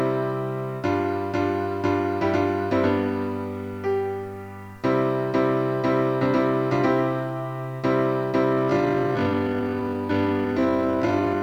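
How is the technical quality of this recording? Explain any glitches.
The recording has two clear problems: grainy distortion throughout, and a slowed, dragging ending.

Low bit depth without dither runs through the whole clip. The grain tracks the sound and sits about 40 dB below it. Quiet passages turn gritty. This fits a 9-bit signal, likely truncated without dither, so the error follows the waveform.

A time-stretched section starts at 8.43 s and runs to the end. The pace abruptly drops to about 0.54 times normal speed while pitch holds. It drags. The likely cause is software lengthening the audio by repeating short pieces.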